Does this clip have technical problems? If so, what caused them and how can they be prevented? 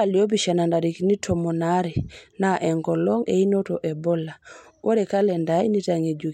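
Yes. Clock slip clicks run from 0.17 s to 6.27 s as faint, regular ticks roughly every 70 ms, around seventy in all, heard through the speech. Each tick is a single sample dropped or repeated, likely because two devices free-run on separate clocks. The spacing fits a mismatch of around 300 ppm. Locking every device to one shared word clock, or inserting an asynchronous sample-rate converter between them, prevents it.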